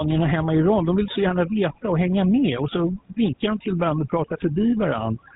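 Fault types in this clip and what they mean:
Overdone noise removal: The background drops and breaks up into twinkling specks. A noise reduction stage set far too hard is cutting individual frequency bands whenever they approach its noise estimate, taking quieter parts of the speech with them.
GSM full-rate codec: The speech has a plainly audible buzzy, gravelly roughness, and nothing is heard above 3.8 kHz. This fits the 13 kbps GSM full-rate codec, which models the vocal tract and excites it with coarse, regularly spaced pulses, discarding most of the fine detail.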